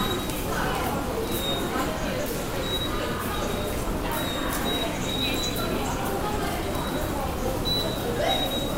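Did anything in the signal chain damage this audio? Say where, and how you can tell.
No, no signal-chain damage heard.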